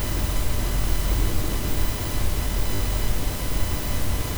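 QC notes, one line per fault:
0.82–0.84 s, repeated buffer: new audio missed its deadline, so the device replayed the last 20 ms block once, which fits a 20 ms buffer. The same slice sounds twice with a hard seam, heard as a brief click-like stutter, and a short stretch of sound goes missing.
2.76–2.80 s, repeated buffer: the stall lasted longer, so the same 20 ms block played three times in a row. The hard joins stack into a short buzzy stutter, and roughly twice as much sound is lost.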